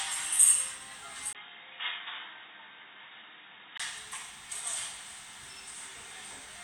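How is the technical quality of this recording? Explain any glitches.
The recording has one clear fault. From 1.33 s to 3.80 s, after a brief 20 ms dropout, the sound turns dull and boxy, roughly 10 dB quieter, with nothing above 3.8 kHz and a new noise floor about 35 dB down. The likely cause is an input switched to a poorer device.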